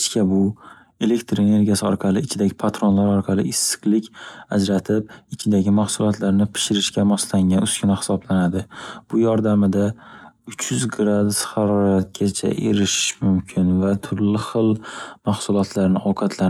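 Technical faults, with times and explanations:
9.92 to 14.86 s, time-stretched section: the speech abruptly drops to about 0.67 times its normal pace for nearly 5 seconds while its pitch stays where it was, and the stretched passage drags. That combination likely comes from software lengthening this stretch to fill a set duration, keeping pitch intact by repeating short slices of the signal.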